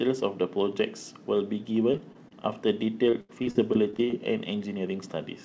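Repeated packet loss (robotic sound) occurs from 1.92 to 2.33 s and again from 3.11 to 4.14 s. Packets went missing in quick succession, and each hole was patched by extending the preceding sound. The first stretch has short dropouts of up to 21 ms, with about 16% of it concealed. The second is harsher: gaps reach 81 ms and a quarter of the span is patched, so the speech turns choppy. Nothing sounds above 8 kHz, which fits G.722 at 64 kbps.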